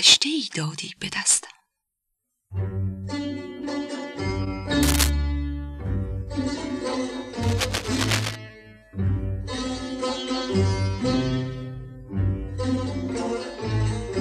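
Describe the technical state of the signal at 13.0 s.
At 13.0 s the signal is intact, with no audible technical fault at that moment.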